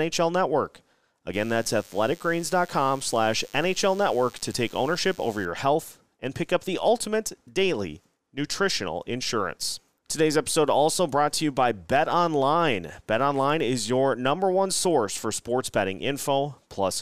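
From 1.34 to 5.46 s, before "health and pick up", a DECT cordless phone buzz: rectified 100 Hz bursts, thinner and edgier than mains hum.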